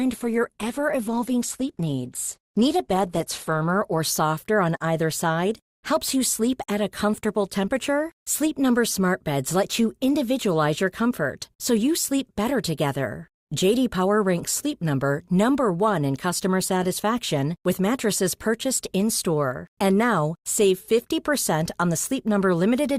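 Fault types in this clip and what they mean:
Adaptive stream starting at a low bitrate: until 4 s the speech stops near 12.1 kHz and sounds codec-smeared, then sharpens abruptly, gaplessly, just before "softer on either side".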